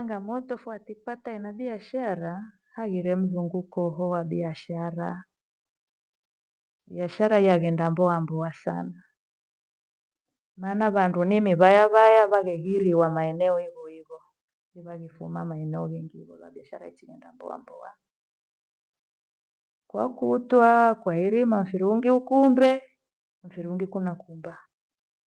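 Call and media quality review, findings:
Automatic gain falling, 0.05 to 0.71 s and 7.2 to 13.11 s (ending just before "maeneo hivo"), each about 3 dB down. AGC judged the input too loud and eased the gain back. The background sinks with the speech, unlike a talker moving away.

Automatic gain rising, 0.64 to 10.85 s, about 12 dB up. AGC judged the level too low and lifted the gain slowly. Noise floor swells in step with the speech over seconds, which a talker raising their voice would not do.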